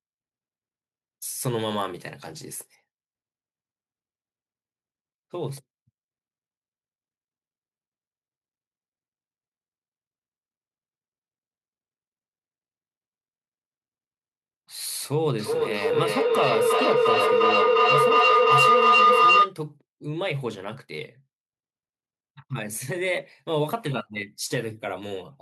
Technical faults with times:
15.39-19.57 feedback howl

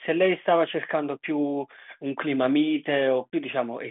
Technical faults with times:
none

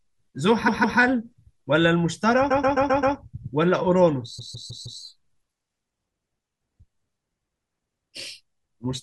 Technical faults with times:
0.67-0.98 repeated frames
2.50-3.15 repeated frames
4.38-5.00 repeated frames

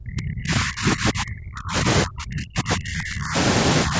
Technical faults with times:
0.00-3.36 speech suppressed in double talk
3.85-3.96 speech suppressed in double talk

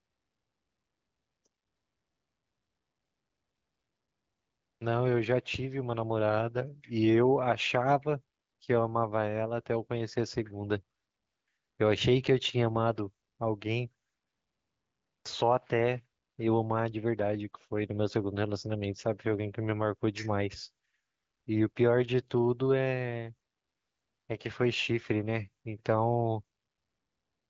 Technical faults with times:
none

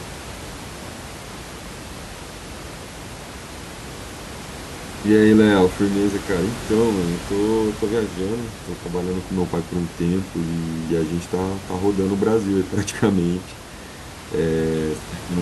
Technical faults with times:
none

